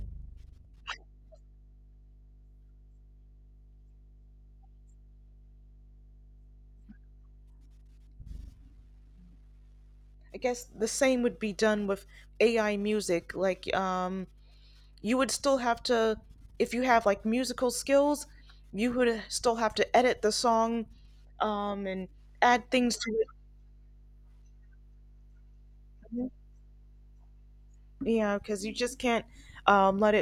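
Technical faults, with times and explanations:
Throughout, mains hum: a steady 50 Hz tone with some low harmonics above it runs beneath the speech at roughly 25 dB below it. The power line is coupling into the signal through a ground loop or a nearby transformer. Unlike low-frequency rumble or handling noise, which are broadband and shift with movement, this is a fixed, unwavering pitch whose level never changes with the speech.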